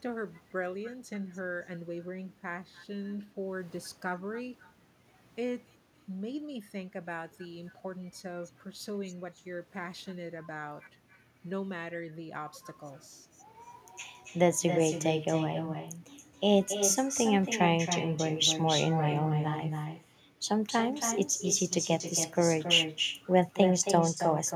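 Throughout, the speech has echo with no canceller: a far-end loudspeaker leaks into its microphone and the network returns it, so each phrase recurs roughly a third of a second later, about 8 dB quieter. A spectrogram shows a quieter trailing duplicate of every syllable.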